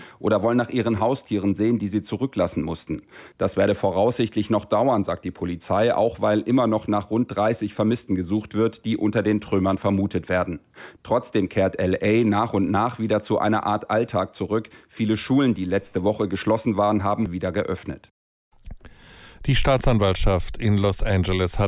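No technical faults can be heard anywhere in this clip.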